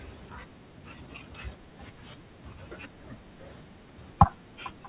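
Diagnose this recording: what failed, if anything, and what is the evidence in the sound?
At 0.56 to 0.58 s the jitter buffer skips ahead: about a second of speech is discarded and playback joins the later audio almost directly, with no silence or concealment fill. Unlike a dropout, nothing is padded; the material is simply missing.

From 0.66 to 1.73 s a jitter buffer speed-up follows as the receiver trims its excess delay, cutting short pitch-period pieces repeatedly to run about 112% speed, removing roughly 150 ms. Pitch stays put, which distinguishes it from a sample-rate mismatch. The G.711 A-law path's 4 kHz ceiling is audible throughout.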